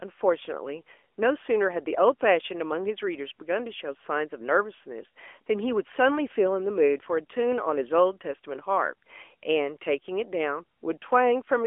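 From start to finish the speech carries AMR narrowband mobile codec damage. The audio was squeezed through an 8 kHz phone codec that rebuilds the voice from a vocal-tract model and a few excitation pulses, leaving a plainly audible buzzy, synthetic edge consistent with a mid-rate mode near 10.2 kbps. The band runs roughly 300 Hz to 3.4 kHz, so a spectrogram shows a hard ceiling with nothing above 3.6 kHz and thinned lows.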